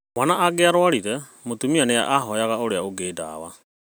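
Nothing goes wrong in this speech clip; the only thing of note is an ordinary, editor-style fade-out that starts around 3.5 s and settles by 3.64 s, with no click or hard edge.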